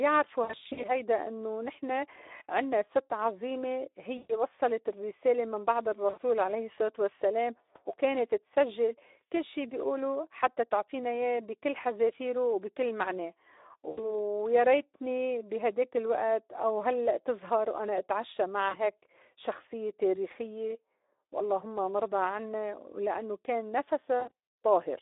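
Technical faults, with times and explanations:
Throughout: Speex codec. The speech is confined to a 300 Hz to 3.7 kHz telephone band and sounds hoarse and noisy, with a grainy, buzzy edge. The coding has too few bits to model the excitation cleanly, which fits a low-rate Speex mode around 11 kbps.
0.43–0.90, 4.17–4.32, 6.10–6.19, 13.89–14.12, 18.69–18.82 and 24.19–24.31 s: VoIP packet loss concealed by the speech codec. At each point the decoder fills the missing audio by extrapolating its last pitch and filter, so the sound smears into a fading buzzy tone or coloured noise. The gaps run from 40 ms to 120 ms, and the first is 220 ms spread over 400 ms. One dropout falls right after "وصّلت الرّسالة من بعد", and another comes just before "شخصيّة تاريخيّة واللّهم". After each gap the voice stays weak or blurred briefly while the decoder's state recovers.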